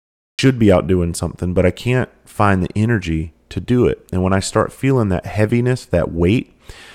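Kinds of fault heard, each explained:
Cut-off start: the capture kicked in late, so there's pure digital silence for the first 0.39 s and then the speech just lands mid-sound, with no natural attack or fade-in. You're hearing it join partway through rather than from its real beginning.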